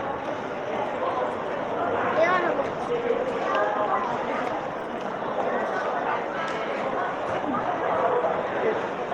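From 2.55 s to 4.95 s there is a call bitrate drop. The encoder was starved of bits, which fits a fall from 32 to 18 kbps. The sound turns coarse and watery. Highs above 12 kHz vanish, and the lowest stretch lasts 1.59 s.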